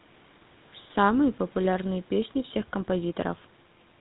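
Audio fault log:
throughout GSM full-rate codec: the speech was passed through the original GSM full-rate coder, which rebuilds each stretch of sound from a vocal-tract model driven by regular pulses, keeping only one excitation sample in three. The damage is plainly audible as a buzzy, gravelly coarseness, and the band stops at about 3.9 kHz. This points to a bitrate around 13 kbps.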